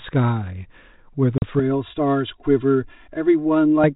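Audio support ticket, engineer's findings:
Packet loss on the ADPCM call, 1.38–1.43 s: hard-edged 40 ms silence, about two packets. Waveform shows a flat gap with abrupt edges; spectrogram a blank vertical strip. Resumes slightly distorted while the decoder's predictor and step size resync.

Channel delay (comb filtering), 1.6–3.84 s: hollow, phasey tone. One channel lags roughly 3 ms before the mono sum. Spectrogram shows fixed, evenly spaced dark horizontal notches, the first near 150 Hz, beneath the light G.726 32 kbit/s coding.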